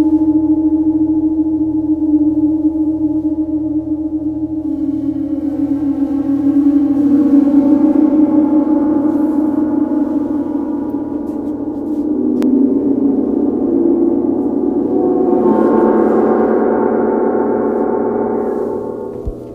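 At 12.43 s, compressed frames are skipped: about two frames, roughly a fifth of a second, never play, so the sound jumps forward. Unlike a dropout, there's no silent gap. The skipped frames are about 93 ms each.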